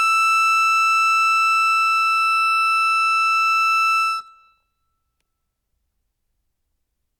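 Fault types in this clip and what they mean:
Nothing here to flag: the music comes through without any audible faults, so there's nothing to list.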